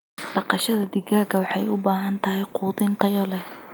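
Listening to the speech recording, nothing stood out as a technical fault at any point.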